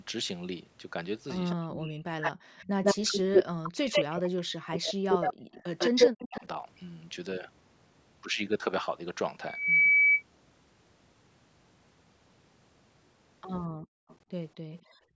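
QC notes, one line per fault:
1.5–1.55 s, 2.22–4.21 s and 5.11–6.45 s: echo leak. A delayed copy of the speech comes back, a brief faint scrap at 216 ms and about 20 dB down, then longer stretches at 151 ms and roughly as loud as the speech. This is likely a loudspeaker echo that the far side's canceller failed to remove.
1.55–5.33 s and 5.91–6.56 s: speech suppressed in double talk. The talker dips and drops out in pieces, about 40 dB at worst, for roughly 3 s in the first span and under half a second in the second. The likely cause is a canceller that could not separate the talker from the overlapping echo and turned both down.
9.46–10.23 s: loudspeaker feedback squeal. A single 2.3 kHz tone swells over about a third of a second to roughly 10 dB above the signal. A microphone was picking up its own loudspeaker, and the loop gain passed one at that frequency, so the tone kept feeding itself.
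13.68–15.16 s: background gated by the echo canceller. The room sound drops by about 40 dB, for around a second in total across this span. While the loudspeaker played, the canceller clamped the microphone hard, and the room sound returns when it releases.
14.08–14.16 s and 14.73–14.77 s: echo leak. Two very faint scraps of delayed speech appear at 235 ms and about 30 dB down, leaking through during the gated stretch. They are likely residual loudspeaker pickup that the canceller did not fully suppress.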